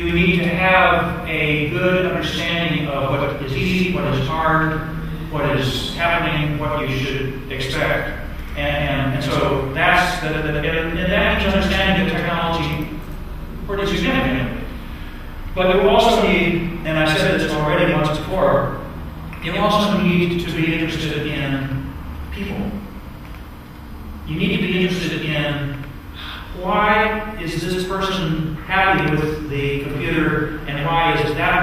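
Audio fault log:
Throughout: channel delay (doubling). One side of the stereo pair runs about 93 ms late, and once the two channels are folded down to mono you hear everything twice. The second copy lands at the same level as the first, so it comes across as a slapback echo trailing each sound, sometimes more like a smeared doubling. A lag that size points to a buffer of around 4096 samples.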